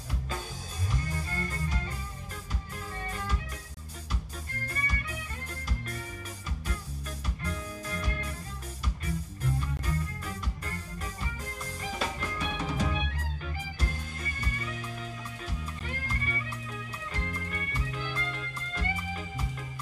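Gaps between stream segments fall at 3.74 to 3.77 s, 9.77 to 9.79 s and 15.79 s, six seconds apart, which fits 6-second segments. At each boundary the timestamps leave a small hole that playback fills with silence, adding 27, 22 and 16 ms. The sound stops abruptly and resumes just as sharply, a brief hard-edged dropout, while nothing of the audio itself is lost.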